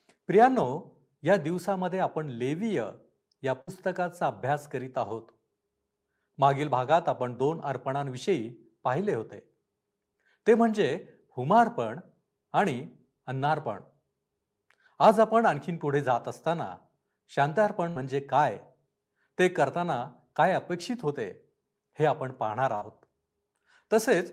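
At 3.61 to 3.70 s, 17.89 to 17.98 s and 22.75 to 22.84 s the speech briefly freezes into a held, fading buzz or hiss, then jumps ahead. Each is a burst of packet loss: roughly 60 ms was concealed by extending the last sound, and about 60 ms of speech never arrived.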